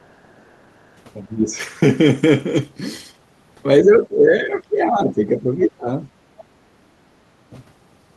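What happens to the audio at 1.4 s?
At 1.4 s the echo canceller likely hit double talk: with both ends talking at once, it could not tell the near talker from loudspeaker echo and pulled the whole signal down. This is speech suppressed in double talk, running from 1.21 to 1.56 s. The speech dips sharply there, by around 15 dB at its deepest, before returning to normal level.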